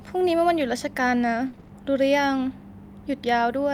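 From 1.47 to 1.71 s the speech turns choppy, with small pieces dropping out in quick succession. This is repeated packet loss: five separate holes, the longest 60 ms, add up to 140 ms of missing audio. The decoder patched each by stretching the last sound it had, so more than half of that quarter-second is concealment rather than real signal.

Between 2.37 and 2.39 s there is a brief roughening, a grainy, noisier texture, but no gap. One 20 ms packet was lost and rebuilt from error correction: the following packet carried a low-bitrate copy of it, and the decoder played that coarser version in place of the original.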